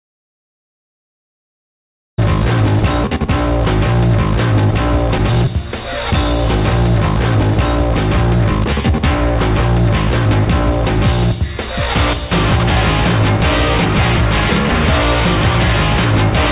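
The audio, carried over a call path whose band stops at 4 kHz, which fits G.711 mu-law at 64 kbps, opens in an audio dropout to silence already under way, running from 0 to 2.18 s with no room tone, likely from lost input while recording continued. A skip ahead at 3.04 to 3.06 s joins the two sides directly, with about a second of material missing where a backlog was discarded. From 5.18 to 5.49 s a jitter buffer speed-up plays the sound at 138% speed with pitch unchanged, trimming about 100 ms of short pitch-period pieces to reduce delay.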